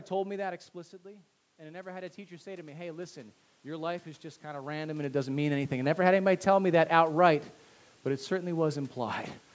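From 1.03 s to 6.06 s, automatic gain rising takes hold. The speech level at the microphone dropped by about 10 dB around half a second in, as if the talker leaned away, and the gain control answered by raising its gain by about 10 dB. It climbed slowly, across about five seconds, so the voice and the room noise behind it swell together. The noise floor climbs, even through the later shift in the talker's distance near 4.5 s.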